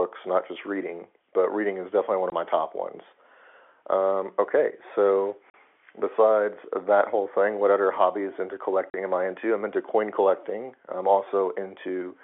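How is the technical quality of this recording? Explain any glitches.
The telephone-band speech, limited to about 300 Hz to 3.4 kHz by G.711 coding, is broken by three brief dropouts.

Packet loss filled with silence at 2.30–2.32 s (after "reading is definitely one"), 5.50–5.54 s (after "okay so") and 8.90–8.94 s (after "what other hobbies into"). Lost packets were replaced with silence, leaving 20 ms and 40 ms gaps that fit 20 ms packets. Each gap has hard edges.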